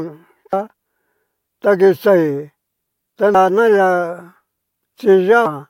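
Damaged data in a compressed stream strikes at 0.53 to 0.56 s, 3.34 to 3.38 s and 5.46 to 5.49 s: the decoder misreads corrupted frames and resyncs, producing brief glitches seen as vertical broadband smears on the spectrogram.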